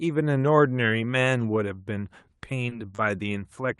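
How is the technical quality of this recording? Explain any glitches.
The speech has three brief hitches late in the clip, at 2.37 to 2.41 s, 2.69 to 2.73 s and 2.95 to 3.00 s. In each, a sound is held slightly too long with a faint buzzy smear before the speech carries on. These are short stalls from a late packet. The jitter buffer ran dry, and the receiver stretched the last audio for 20, 20 and then 30 ms until the packet arrived. Nothing is lost; the timing just slips.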